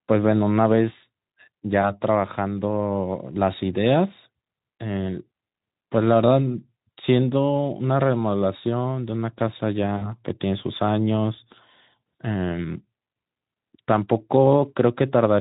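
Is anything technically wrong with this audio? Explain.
Yes. VoIP packet loss concealed by the speech codec occurs at 1.81–1.92 s, 9.97–10.06 s and 12.01–12.03 s. The decoder fills each gap of about 20, 40 and 20 ms by extending its last pitch and spectral shape at falling gain, so the speech briefly turns into a buzzy tone or coloured noise and fades, with weakness lingering afterward. The Speex coding beneath it adds only light coding damage.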